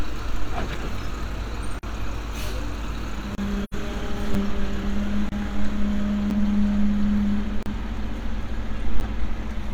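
At 0.74 s the first block of digital silence appears, a dropout of about 6 ms. The output buffer was likely not filled in time and its samples were left at zero. The signal drops to nothing and returns with no fade, so this short one is heard as a single tick. The same fault recurs from 1.79 to 1.83 s (40 ms) and from 3.35 to 3.38 s (30 ms). These longer gaps sound like brief holes.

From 3.63 to 3.74 s there is AAC frame loss with muting. About 85 ms of audio is missing, which fits two lost frames whose spectra the decoder zeroed. The overlapping transform windows taper the sound out and back in, so this hole has soft edges.

Further blocks of digital silence follow at 4.34 s (about 6 ms) and from 5.29 to 5.32 s (30 ms). Another comes at 6.30 s (about 8 ms), then from 7.63 to 7.66 s (34 ms), and the last at 9.00 s (10 ms). Each starts and ends abruptly. The short ones are ticks, and the longer ones are short holes.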